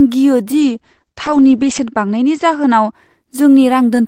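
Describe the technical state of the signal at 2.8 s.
At 2.8 s the speech sounds dull, rough and watery, with the top end missing above roughly 8 kHz where the earlier sound reached up to 20 kHz. This is a call bitrate drop spanning 0.61 to 2.99 s. The call's bandwidth estimate fell, so the encoder coded far more coarsely, which fits a fall from about 32 kbps to about 10 kbps, and it cut the high band. The worst stretch lasted about 1.2 s before recovery.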